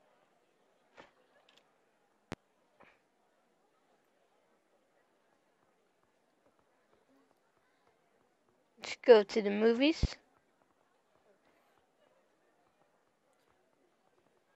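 Two loud pops interrupt the sound, one from 2.32 to 2.35 s and a stronger one from 10.03 to 10.06 s, each a single sharp thump over audio that continues beneath it. The first peaks about 5 dB above the signal and the second about 10 dB. The likely cause is a voltage pulse from a switch, plug or static discharge. On a waveform each shows as a brief spike. On a spectrogram each is a thin vertical broadband stripe.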